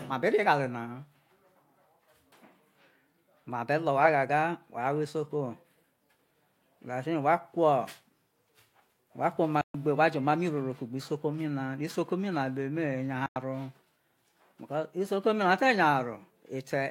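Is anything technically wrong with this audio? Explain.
Yes. Two digital broadcast dropouts occur in this speech, at 9.61 to 9.75 s and 13.26 to 13.36 s. The receiver lost valid frames and muted, so the sound quickly fades out over about 3 ms, leaving silent holes of 128 ms and 96 ms. The missing audio is lost.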